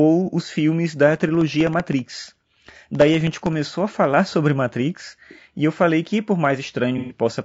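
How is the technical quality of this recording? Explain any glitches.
The technical quality is compromised, with three distinct faults.

Throughout, the speech sounds rough and grainy, with noise between harmonics and a dull top band, likely low-delay AAC compression at a low bitrate, around 32 kbps.

From 1.16 to 3.66 s, periodic USB or driver dropouts blank roughly 1 ms of audio every 64 ms, producing around forty evenly spaced ticks.

From 6.98 to 7.18 s, AAC frame loss with concealment fills about 120 ms, consistent with four lost frames, from the previous spectrum, giving a smeared, phasey patch.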